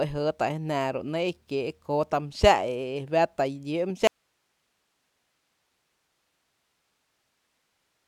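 The signal path likely lost its input at 4.07 s while staying live, so this speech clip suffers an audio dropout to a faint residue: only hiss, far below speech level, remains to the end.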